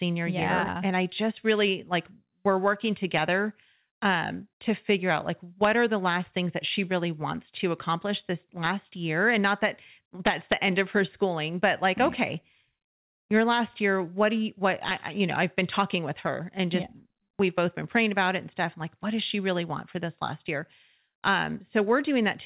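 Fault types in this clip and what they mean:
Integer overflow: at 3.18, 5.64, 8.65, 10.27–10.53, 14.89–14.91 and 15.59 s, loud peaks pushing up to about 2 dB past the integer limit wrap to the opposite sign instead of being limited, giving cracks far sharper than clipping, heard over the 4 kHz-limited call audio.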